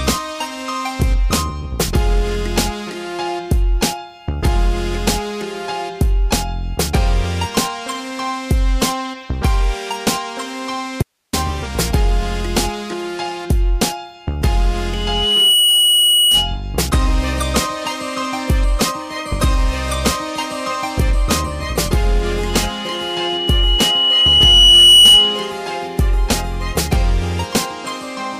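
The signal path most likely lost its source briefly while the chain downstream stayed live, causing an audio dropout to a faint residue from 11.03 to 11.33 s. The sound cuts off abruptly for about 0.3 s, leaving only hiss roughly 55 dB below the normal level, then snaps back.

A microphone then picks up the loudspeaker it feeds, and the loop gain exceeds one at 2.9 kHz, producing loudspeaker feedback squeal twice. From 14.92 to 16.57 s a pure tone swells within a second to about 5 dB above the signal. From 22.49 to 25.57 s it climbs over roughly three seconds to about 10 dB above.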